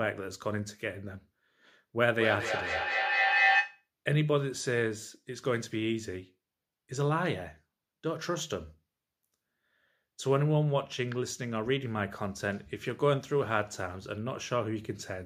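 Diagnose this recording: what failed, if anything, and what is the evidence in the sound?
Feedback echo between two devices, 2.0 to 3.88 s, at the call-processing stage: the speech returns roughly every fifth of a second and the repeats grow to about 4 dB above the speech. A second device's loudspeaker feeds this microphone, and neither echo canceller removes the other's playback.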